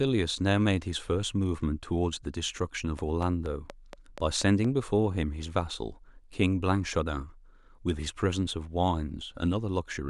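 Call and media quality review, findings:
Train of clicks, 2.99 to 4.66 s. About seven sharp ticks at a steady 4.2 per second, all the same shape, poking roughly 10 dB above the speech and audible in gaps too. Likely cause: periodic interference from nearby gear or a faulty connection or power supply injecting pulses into the path. Even spacing suggests a timed source rather than random handling noise. Worth checking cabling and grounding near the capture device.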